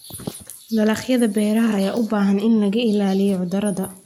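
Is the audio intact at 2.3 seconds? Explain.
Yes, the audio is intact at 2.3 seconds, with no audible fault at that moment.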